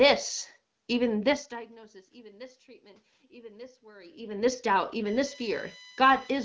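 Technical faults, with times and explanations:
5.06 to 6.44 s, USB whine: a steady fixed-pitch whine appears for the last stretch of the clip. It is built on 1 kHz, with its strongest component at the 2 kHz harmonic, and sits roughly 20 dB below the speech. The USB bus pulls current in bursts once per millisecond, and that periodic load leaks into the microphone's power or ground, so the 1 kHz frame rate and its multiples end up as an audible tone.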